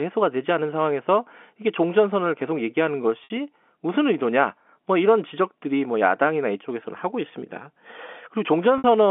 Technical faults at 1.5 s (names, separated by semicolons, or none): none